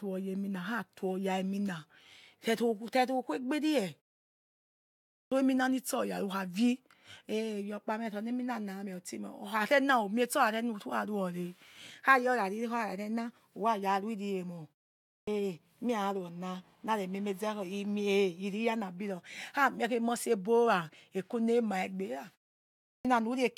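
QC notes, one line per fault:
5.08–5.32 s, 15.05–15.28 s and 22.82–23.05 s, clipped start after a pause: each time the sound comes back after a gap (about 1.15 s, 0.39 s and 0.54 s of quiet), roughly a quarter-second of the onset goes missing, about 0.24, 0.22 and 0.23 s. The output seems to drop into a low-power state during silence and needs that long to wake back up, so each phrase jumps in abruptly without its first sounds.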